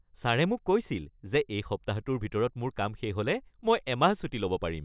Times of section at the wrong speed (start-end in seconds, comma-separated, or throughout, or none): none